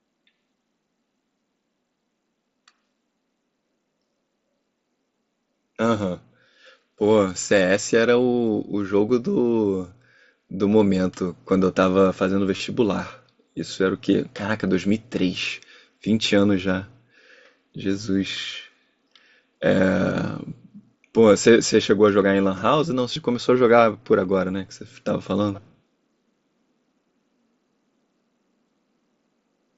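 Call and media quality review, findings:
Concealed Bluetooth headset packet loss, 12.57–12.60 s (about 30 ms) and 23.13–23.16 s (about 22.5 ms): short buzzy repeated fill at full level, no silent gap, over an intact mSBC wideband link.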